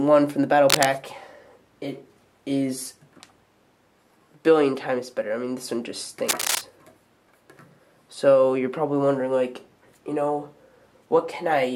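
Two bursts of cable scratch noise, from 0.70 to 0.86 s at roughly the level of the sound itself and from 6.28 to 6.62 s somewhat quieter, are likely a worn connector being moved. Unlike isolated clicks, each is a dense, uneven scratching rustle.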